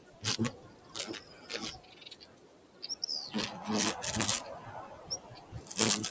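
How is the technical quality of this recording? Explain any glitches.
The quality is compromised by a speech noise suppressor left running on non-speech sound, causing audible level dips and pumping.

Noise suppressor applied to music or sounds, throughout: the processor mistakes steady sound for noise, swinging gain by roughly 15 dB. Unlike ordinary compression, onsets stay intact while sustained parts pump and thin. The call microphone processing's band limit near 8 kHz is normal.

Sound cut by the noise suppressor, at 0.00–0.23 s, 0.55–0.95 s, 1.20–1.50 s, 1.78–2.83 s and 4.96–5.71 s: sustained portions sink by about 9, 8, 7, 9 and 7 dB as the suppressor clamps down. These are sagging tails, not clean dropouts.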